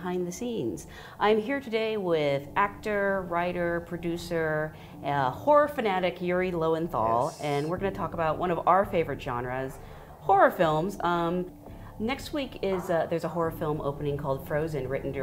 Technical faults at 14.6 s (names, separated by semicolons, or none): none